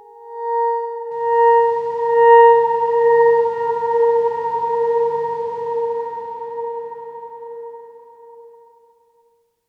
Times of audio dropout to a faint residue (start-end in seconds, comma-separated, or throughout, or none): none